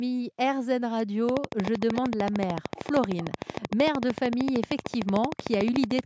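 A train of clicks runs from 1.29 s to 6.00 s: around seventy evenly spaced pops at 13.2 per second, standing well above the speech, likely interference or a faulty connection injecting pulses.

An echo leak appears at 2.76–2.89 s and 3.45–3.70 s: a faint copy of the speech, about 20 dB down, trailing by 204 ms, likely a loudspeaker echo the canceller missed.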